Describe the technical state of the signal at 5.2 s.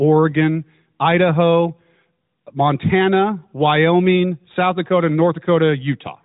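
At 5.2 s the speech is intact, with no fault at that point, heard through the narrowband band limit of the AMR narrowband mobile codec.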